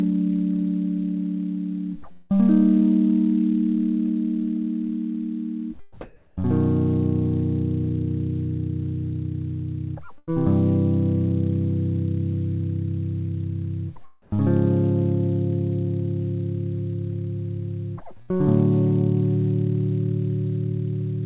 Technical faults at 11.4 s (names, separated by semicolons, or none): none